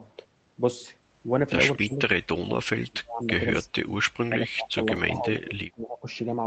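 At 1.8 s, for about 80 ms, an echo leak appears: a faint copy of the speech returns roughly 0.25 s after the original, around 25 dB below it. This is likely a loudspeaker echo the far-end canceller failed to remove. On a spectrogram it is a weak smear repeating the harmonic pattern of the speech a quarter-second later. On the waveform it is barely visible riding under the main signal.

From 1.86 to 3.43 s, from 3.61 to 3.93 s, and from 4.27 to 6.06 s, the speech sinks, thins and breaks into pieces, dropping by as much as 30 to 35 dB. This is speech suppressed in double talk, likely caused by an echo canceller that could not separate the talker from overlapping far-end sound and attenuated both. The waveform envelope collapses in uneven chunks across each span. The spectrogram shows the upper harmonics fading and whole patches going dark.

At 4.96 s, inside the last suppressed stretch, a block of digital silence cuts the signal to silence for about 3 ms, which fits a 128-sample block. 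With no fade on either edge, it is heard as a sharp tick. The waveform shows a flat line with abrupt vertical steps at both ends. The spectrogram shows a thin full-height vertical stripe from those two discontinuities.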